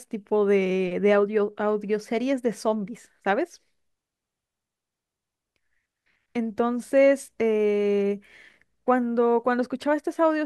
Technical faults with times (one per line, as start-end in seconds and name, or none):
none